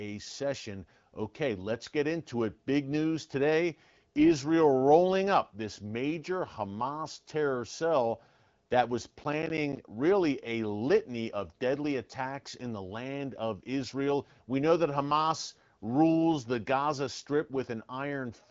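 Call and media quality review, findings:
Processor overload crackle, 9.19–9.77 s: gritty burst of hard-edged silent gaps, each around ten milliseconds, from audio buffers missing their deadlines in a row. Dense crackle, not one long dropout.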